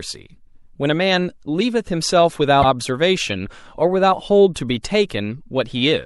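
A watery, swirly quality runs through the whole of this speech clip, with the top end sounding dulled and s sounds coming out metallic and chirpy rather than crisp. That points to MP3 compression as the likely cause, and the degree of damage fits a low bitrate of about 64 kbps. At that rate the encoder cannot cover the full spectrum, so it trims the treble above a fixed frequency and drops the quieter frequency lines, which then flicker in and out from one frame to the next and produce that swirling texture. Between 2.60 and 2.65 s a brief glitch breaks into the sound. This comes from damaged data in a compressed stream. A short stretch of the encoded data was corrupted, so the decoder misread those frames and lost its place before locking back onto a valid frame header.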